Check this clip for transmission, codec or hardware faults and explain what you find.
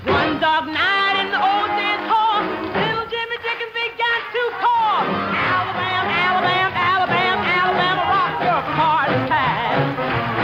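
Nothing found: no faults anywhere in the audio.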